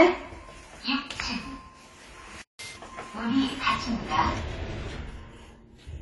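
The whole clip has a dull, smeared quality with a fizzy, warbly edge on sustained sound, and nothing comes through above 11.5 kHz. That's most likely AAC compression, and the damage is plainly audible, which fits a low bitrate somewhere around 32 kbps.

At 2.42 s the sound just drops out mid-flow and stays silent until 2.59 s, a gap of about 175 ms. It's a playback stall: the player ran dry or got held up, most likely starved of data, and output went quiet until it recovered.

Right after, from 2.59 to 2.77 s, there's catch-up at higher speed. The player runs its backlog at 2.0 times normal speed to win back the lost time, so everything briefly jumps up in pitch, around ten semitones, before settling back to normal.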